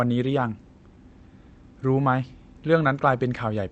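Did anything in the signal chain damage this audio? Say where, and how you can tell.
No, nothing damaged it.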